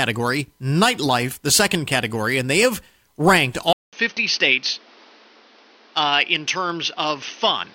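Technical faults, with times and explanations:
3.73 to 7.74 s, input switched to a poorer device: after "and they have ranked" comes a 200 ms gap, then duller speech with nothing above 6.3 kHz and new noise about 30 dB down, likely from a narrower-band microphone. The spectrogram shows the gap and a flat ceiling, and the waveform level holds steady.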